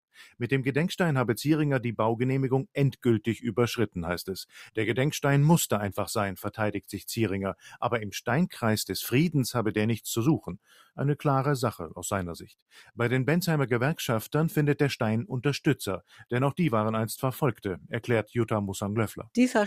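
At 7.56 s the sound gets clipped by the noise suppressor: for a bit over a tenth of a second, up to 7.77 s, it dips by about 15 dB, as if the suppressor misread it as background noise and pulled it down. The same thing happens again from 10.63 to 10.98 s, this time deeper, about 17 dB, and lasting roughly a third of a second. Both times the level sags briefly rather than cutting out.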